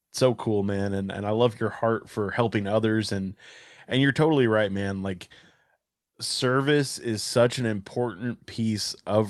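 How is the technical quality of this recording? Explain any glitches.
No glitches or technical faults.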